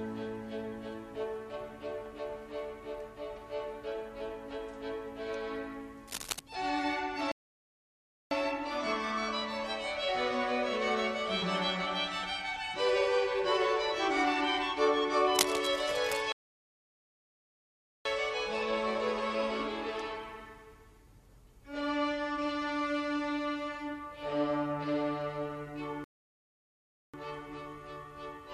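From 6.07 to 6.40 s, and again from 15.29 to 16.21 s, cable scratch noise appears: dense, uneven crackling and rustling roughly 5 dB below the sound itself. This is likely a worn cable, connector or control being moved, its contact resistance fluctuating rapidly. Rebuffering stalls occur at 7.32 to 8.31 s, 16.32 to 18.05 s and 26.04 to 27.14 s, adding 1.0 s, 1.7 s and 1.1 s of silence. Each time the player runs out of downloaded audio and halts, and playback then resumes exactly where it stopped, with no material lost.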